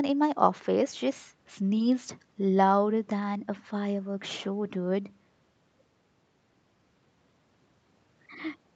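Nothing stood out on listening to this speech recording.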